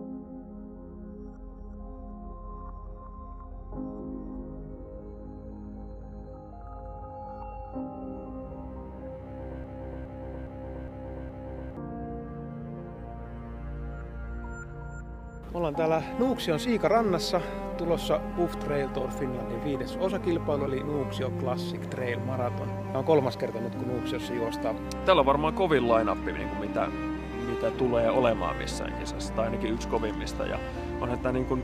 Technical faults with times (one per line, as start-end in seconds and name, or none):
9.64-11.77 broken-record loop